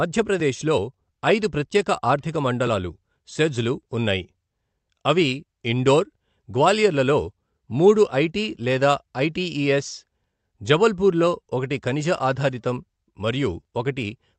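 Nothing goes wrong anywhere in this speech, which just comes through an ordinary WebRTC call path, with the top end easing off at around 8 kHz the way a call codec tends to leave it.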